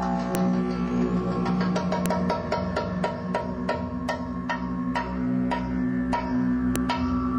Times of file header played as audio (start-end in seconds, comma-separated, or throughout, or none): 0.35, 2.06, 6.76